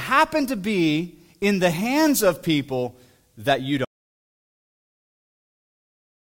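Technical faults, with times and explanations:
3.85 s to the end, audio dropout to silence: right after "of people that you" the speech just stops mid-flow and never comes back. What's left is dead silence, not even room tone, so it isn't a pause or a quiet stretch. That points to the input being lost, most likely a disconnected device, a failed link or a stray mute, while the recorder kept writing silence. Whatever followed is simply gone.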